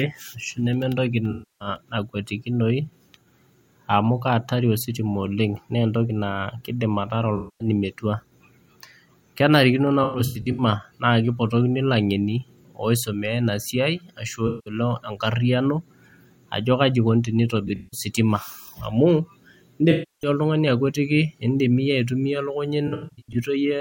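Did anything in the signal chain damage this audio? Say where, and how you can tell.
Yes. The damage is at the codec stage: AAC frame loss with concealment. Smeared, phasey patches replace the speech at 1.31 s after "neme entoki", 7.36 s after "keidim ataara", 10.03 s, 14.47 s, 17.67 s after "ajo kaji eikoni", 19.91 s and 22.87 s. Each lasts 0.2 to 0.34 s. At 10.03, 17.67 and 22.87 s the gaps are broken up, with runs of roughly 0.1 to 0.15 s. The decoder rebuilt the missing frames from the last good spectrum.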